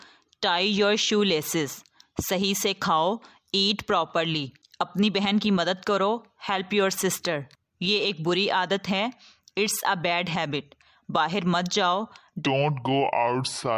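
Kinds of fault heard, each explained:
Wrong sample rate, 12.46 to 13.78 s: the closing stretch slows to 0.726 times its proper speed and drops 5.55 semitones, pitch and tempo falling together because the samples are played without conversion, which fits 44.1 kHz audio being played at 32 kHz.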